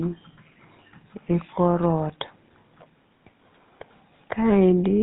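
From start to finish the speech carries GSM full-rate codec damage, plainly audible. The codec rebuilds the voice from a vocal-tract model driven by sparse pulses, which fits a 13 kbps stream. Nothing survives above 4 kHz. The result sounds buzzy, gravelly and dull.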